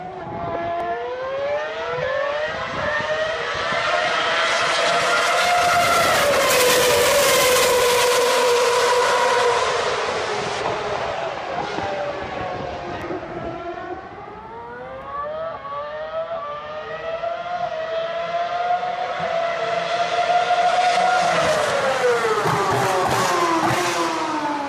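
From 6.49 to 10.61 s, pre-emphasis is left on: the treble boost, consistent with the CD 50/15 µs curve, was never undone, lifting 10 kHz about 8 dB over 1 kHz, so the sound turns thin and bright.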